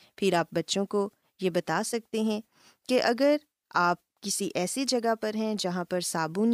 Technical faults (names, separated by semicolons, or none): none